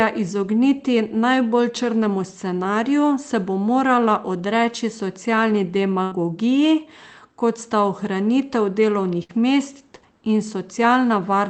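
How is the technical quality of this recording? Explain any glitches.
The recording has two brief dropouts from a burst of packet loss. The call path cuts off at about 8 kHz, which fits Opus at a low bitrate.

At 6.03 to 6.13 s, after "bo morala odreči socialni", and at 9.23 to 9.31 s, before "mest in", packets were lost. Each gap is filled with a fading continuation of the last sound. Then roughly 60 to 80 ms of audio is skipped.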